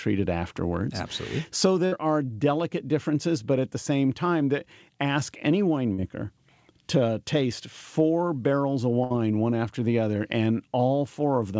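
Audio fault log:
1.86–1.94 s and 9.04–9.12 s, burst of packet loss: about 60 ms of speech lost each time; the receiver stretched and faded the last sound across the gap, heard as a brief held buzz or hiss before speech resumes further on.
5.94–6.00 s, short concealed packet loss: 40 ms never arrived in time and was filled from the preceding sound, then blended back, giving a short smear in the speech.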